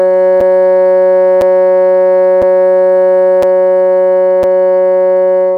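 A short piece of music with a gap between chunks: hard-edged holes of about 6.5 ms at 0.41, 1.41, 2.42, 3.43 and 4.43 s. They repeat once a second, so the audio seems to arrive in one-second blocks with silence slipped in at each join.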